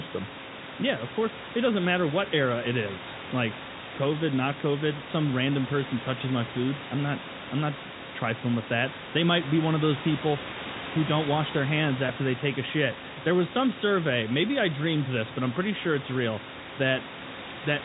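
No technical faults can be heard in this speech recording. The narrow telephone-band sound of the G.711 coding comes through as expected, with room noise about 14 dB below the speech.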